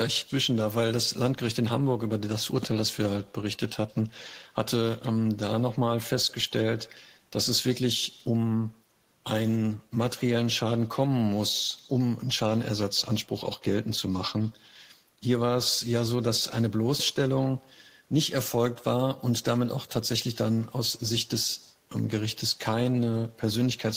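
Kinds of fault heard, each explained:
Echo with no canceller: At the far end the call is being played over a loudspeaker, the microphone there picks it up again, and no echo cancellation strips it out, so the talker's own speech travels back through the network. Throughout the clip every phrase is trailed, around 150 ms later, by a faint, thin copy sitting about 27 dB below the direct speech.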